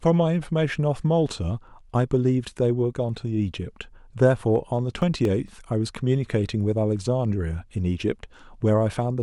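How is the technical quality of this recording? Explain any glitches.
The speech recording carries one audible fault: CD scratch ticks between 4.56 and 5.94 s. Seven short ticks, each lasting a few milliseconds, recur about five times a second. A blemish on the disc exceeds the error correction once per revolution, and the player conceals those samples by interpolating or muting them.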